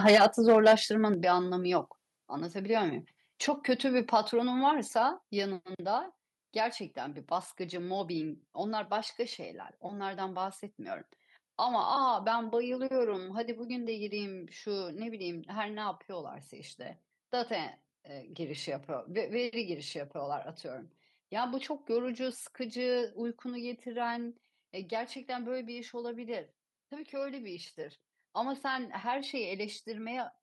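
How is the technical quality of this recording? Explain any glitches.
The recording has two related level faults at the start: clipping in the first second, followed by a series of abrupt drops in input level during the first six seconds.

Microphone overload occurs from 0.05 to 0.74 s. The peaks drive about 7 dB past the converter's full-scale limit, and roughly 7 percent of samples in that stretch are flattened at the ceiling. Squaring off the waveform tops adds harmonics that were never in the speech, so the loudest syllables take on a harsh, crackling, buzzy edge. The likely cause is an input gain set too high for the talker's level.

Microphone volume stepped down occurs at 0.15 s (about 2 dB), 1.14 s (about 6 dB), 2.16 s (about 2 dB) and 5.22 s (about 3 dB). Each step is an instantaneous drop in overall level that affects the speech and the background noise equally, which distinguishes it from a change in the talker's own loudness. 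The pattern fits automatic gain control in the call software likely reacting to the clipping and pulling the device input down in discrete steps. The drops total about 13 dB, and the largest step, 6 dB, is at 1.14 s.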